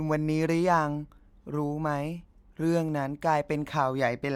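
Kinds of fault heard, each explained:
No technical faults can be heard anywhere in this speech recording, so there is nothing to list or explain.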